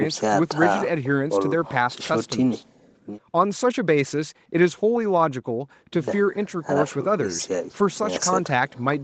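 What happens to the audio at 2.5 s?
Nothing goes wrong at 2.5 s: the speech there is intact, carried through the call path with its band limited to about 8 kHz.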